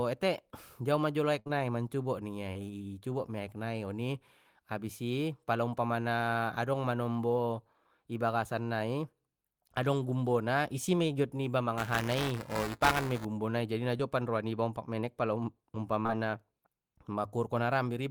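At 1.39 s a burst of packet loss begins, lasting to 1.47 s. About 60 ms of speech never arrived. The receiver stretched the last sound across the gap and faded it, so a held buzz or dim hiss replaces the missing stretch.

Short concealed packet loss follows at once, from 1.47 to 1.51 s, and again at 2.53 to 2.57 s. Each time about 20 ms went missing. The decoder carried the previous sound forward, then blended back. It is heard as a brief smear or wobble.

From 11.78 to 13.25 s there is buffer tearing. Writer and reader of the output ring buffer crossed inside every period. About a tenth of each buffer replays audio from roughly 7 ms earlier. This gives a rattling buzz at 375 Hz, which fits a 128-sample buffer, heard only while speech is present.

Short concealed packet loss returns at 13.97 s and twice in a row at 16.03 and 16.07 s, each about 20 ms. Those last two run together, so the smear there is longer.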